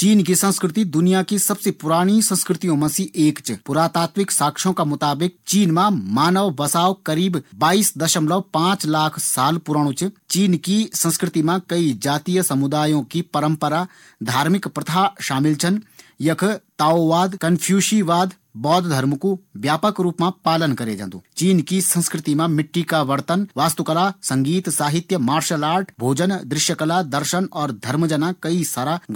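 A bit error spike at 23.07 s, just after "मिट्टी का": one flipped bit throws a single sample to about -25 dBFS, heard as a brief, broadband tick.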